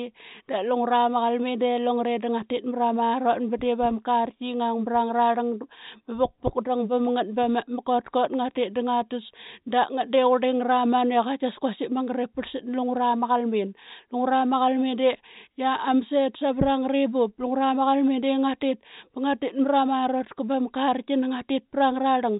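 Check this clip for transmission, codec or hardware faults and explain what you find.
No transmission, codec or hardware faults can be heard: the speech has the narrow telephone band of G.711 mu-law coding at 64 kbps, with nothing above about 3.8 kHz and at most a faint quantisation hiss that rises and falls with the level of the sound.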